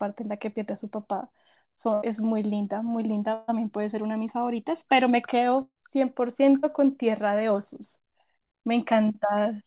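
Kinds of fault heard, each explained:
Burst of packet loss: at 1.94 to 2.04 s, 3.34 to 3.50 s and 5.62 to 5.77 s, runs of call audio arrived too late or not at all, about 80, 140 and 140 ms. The receiver stretched the last received sound into each hole and faded it, giving a held buzz or dimming hiss before the speech picks up further on with material skipped. In the third gap the fill dies away and the final 40 ms or so drop to silence.
Short concealed packet loss: at 6.59 to 6.65 s roughly 40 ms of speech failed to reach the decoder in time, and the receiver papered over it by extrapolating the preceding sound and crossfading back into the real signal. It comes across as a brief smear or wobble rather than a gap. All of this sits within narrowband audio with nothing above 4 kHz, which points to a G.711-style telephone codec.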